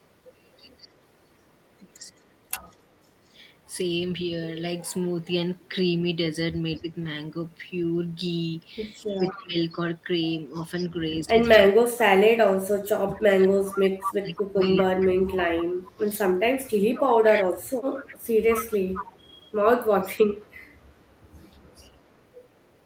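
From 0.79 to 2.79 s a faint echo leak trails the speech by 218 ms at about 30 dB below it, likely from a far-end loudspeaker path that the echo canceller did not fully cancel. A brief scrap returns at 6.76–6.81 s, about 35 dB down. Right after, at 6.81–6.87 s, speech is suppressed in double talk, a shallow dip of about 5 dB. This is likely the canceller mistaking the near talker for echo while both sides are active and turning everything down.

At 9.19–9.56 s a deeper suppression cuts the speech by up to about 20 dB, totalling around 0.2 s. A stronger echo leak starts at the same time and runs to 11.58 s, again 218 ms late and only about 15 dB below the speech.

From 11.26 to 16.09 s the double-talk suppression is heaviest: the speech dips by as much as about 30 dB, for around 4 s in all. From 13.65 to 22.7 s the echo leak continues at about 15 dB below the speech with the same 218 ms lag.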